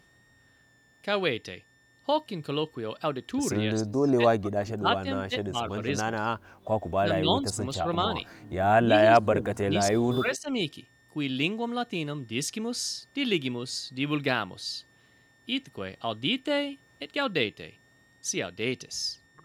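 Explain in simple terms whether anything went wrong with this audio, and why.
A switching supply whistle sits under the speech the whole time. It is a faint high tone between 1.77 and 1.88 kHz, from a power supply switching at an audible rate.

The speech also dips or partly drops out at 3.64–4.86, 5.03–5.07, 5.51–5.57, 6.18–6.39, 7.0–7.6, 7.77–7.86 and 8.86–10.5 s. This is speech suppressed in double talk, likely an echo canceller turning the talker down while the far side spoke.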